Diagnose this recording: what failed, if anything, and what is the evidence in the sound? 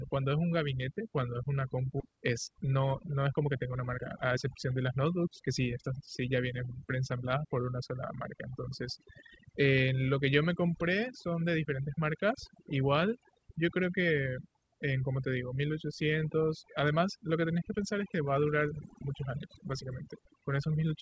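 Call processing: the noise suppressor in the chain was set far too aggressively for a noisy recording. Throughout the clip it drives individual frequency bands down toward nothing whenever their level sits near its noise estimate, and the quieter parts of the voice fall below that threshold too. The background collapses into near silence dotted with twinkling, chirpy specks, and the voice has its softer detail stripped away.

Network and jitter buffer: at 2.00 to 2.02 s there is a skip ahead, where roughly a second of audio was discarded while later packets were already queued, most likely from a buffer overflow or a loss in transit. Nothing was inserted to cover the gap, so the sound on either side of the cut is butted almost directly together. The result is an abrupt forward jump rather than a pause, with that stretch of speech simply gone.

Jitter buffer: from 2.10 to 6.24 s the receiver was holding more audio than its target and worked the backlog down with a jitter buffer speed-up. 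It repeatedly cut out short slices about one or a few pitch periods long, removing roughly half a second in total. Playback runs at about 114% speed with the pitch unchanged, so the voice sounds rushed through that section. The G.722 call path, at 64 kbps, leaves nothing above 8 kHz.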